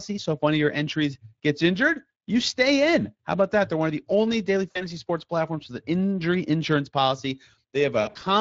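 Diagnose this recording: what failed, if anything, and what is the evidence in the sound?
Speex codec, throughout the clip: this is a codec-stage fault. The speech has a plainly audible hoarse, grainy texture, the sign of a CELP coder with too few bits for its excitation signal. The damage fits Speex at roughly 20 kbps.

VoIP packet loss concealed by the speech codec, at 4.71–4.89 s and 8.01–8.23 s: this is a network fault, masked by the decoder. The first event falls between "of the only daily" and "sports platforms with". About 40 ms is missing, which fits two lost 20 ms frames. The decoder bridges the gap by extrapolating its last pitch and filter with fading gain, and the speech stays weak until the decoder's state rebuilds. The second event is heavier. About 140 ms is lost, scattered over 200 ms, with the longest gap 60 ms, so the concealed sound and the recovering speech alternate several times.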